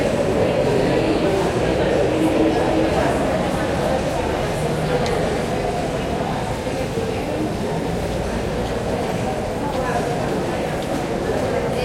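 Periodic USB or driver dropouts from 6.61 to 11.73 s: about seven brief gaps of silence, each roughly a millisecond, every 1.02 s, heard as regular ticks.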